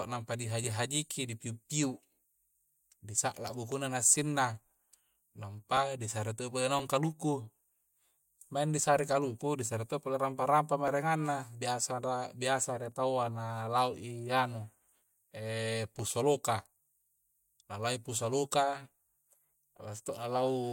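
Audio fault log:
0.64 to 20.09 s, periodic USB or driver dropouts: a small, regular tick cuts into the speech about once every 1.02 s, roughly twenty times across this span, and it falls silent whenever the speech pauses. Each tick marks about a millisecond of audio that was skipped outright rather than padded with silence. The splice joins two mismatched points in the waveform, and that step is the click. The strict spacing points to a background task repeatedly stalling the USB bus or audio driver.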